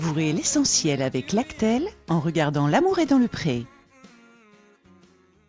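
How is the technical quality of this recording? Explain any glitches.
No technical glitches can be heard anywhere in the recording. There is nothing that calls for an explanation.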